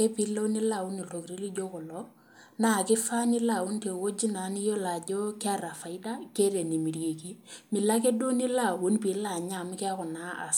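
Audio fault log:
No faults heard anywhere in this speech recording.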